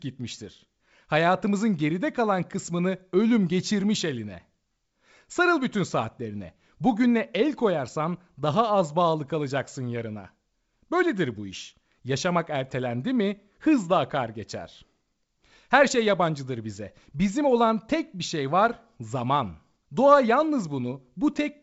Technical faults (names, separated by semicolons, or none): none